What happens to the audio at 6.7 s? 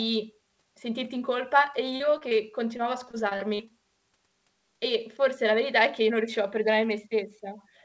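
Nothing goes wrong at 6.7 s: the speech carries on intact through the call path, whose codec keeps it band-limited to nothing above 8 kHz.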